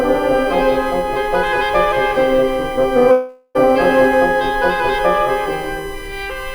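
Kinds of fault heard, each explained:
USB whine: Present throughout the music, a fixed-pitch tone sits at 1 kHz, with its strongest component at 2 kHz, about 25 dB below the music. That pitch points to a USB interface drawing current in 1 ms frames, with the rhythm leaking into the audio path through shared power or ground. The bus timing becomes an audible whine that never follows the music's pitch or dynamics.
long network dropout: From 3.11 to 3.57 s the last sound before the gap is stretched into a fading buzz or hiss for about 0.43 s, followed by 30 ms of silence. The music then resumes with 0.44 s missing. The likely cause is a stream that stopped delivering audio for that stretch, with the receiver concealing the hole by extending what it last had until nothing usable remained.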